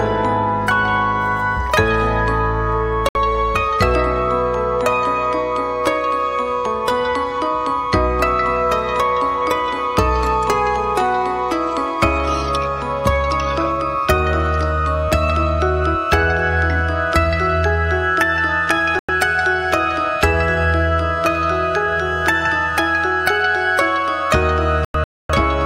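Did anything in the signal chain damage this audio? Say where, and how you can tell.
Yes, at the broadcast reception stage: digital broadcast dropouts. The sound mutes briefly at 3.09–3.16 s and 18.99–19.09 s, then breaks into several holes from 24.85 to 25.30 s, longest about 0.26 s. The receiver lost frames and muted until clean ones returned.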